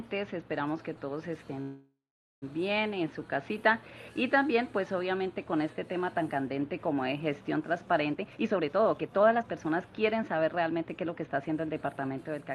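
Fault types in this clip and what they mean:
Call audio freeze: around 1.6 s the sound stalls for about 0.8 s, smearing into a fading buzz then near-silence, likely late packets draining the jitter buffer, then resumes intact.
Jitter buffer speed-up: from 8.1 to 11.2 s the audio runs about 126% fast at unchanged pitch, as the buffer trims tiny pitch-period slices, roughly 0.7 s in total.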